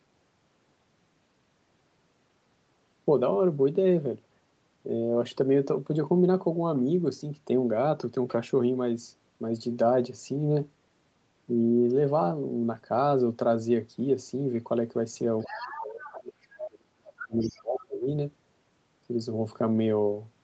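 From 15.4 to 15.8 s, and again at 16.0 to 16.2, 16.42 to 16.67 and 17.17 to 17.62 s, the other side's voice leaks through. It is faint, roughly 10 to 20 dB below the main speech. The likely cause is loudspeaker sound that the echo canceller left in the microphone signal. On a spectrogram these scraps show as a weaker second set of harmonics laid over the speech.

Speech is suppressed in double talk from 15.48 to 16.39 s and from 16.66 to 18.08 s. The talker's level drops, by up to about 30 dB and then about 40 dB. This is likely because the canceller turned everything down when both sides spoke at once. The waveform shows the envelope collapsing in these spans.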